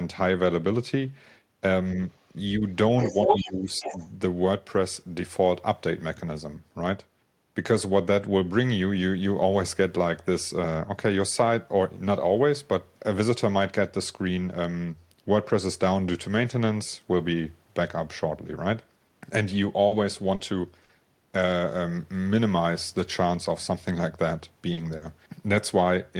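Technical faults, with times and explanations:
2.1 s, 3.0 to 3.5 s and 3.76 to 4.08 s, other side's voice leaking through: a second voice creeps in, faint at first (about 40 dB under the talker), then about 5 dB louder than the talker, then about 10 dB under. The likely cause is an echo canceller missing loudspeaker playback.
2.57 to 2.62 s and 3.25 to 3.95 s, speech suppressed in double talk: the talker's level sags while that other voice overlaps, briefly by about 5 dB, then by about 15 dB over roughly half a second. Likely the canceller couldn't tell talker from echo and ducked everything.
19.87 to 20.92 s, repeated packet loss (robotic sound): what sounds like three close holes, the longest 60 ms and 140 ms in all, about 13% of that stretch. Each is patched by stretching the last sound, so it turns choppy.
24.73 to 24.80 s and 24.97 to 25.04 s, short concealed packet loss: two 40 ms dropouts, each bridged by extending the preceding sound, so you get a quick smear or wobble rather than silence, and a tiny consonant could slip away.
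24.77 to 24.79 s and 25.01 to 25.03 s, lost packet rebuilt from error correction: inside those dropouts, about 20 ms each comes from a low-bitrate backup copy sent in the next packet. No gap there, but those moments sound rougher and noisier.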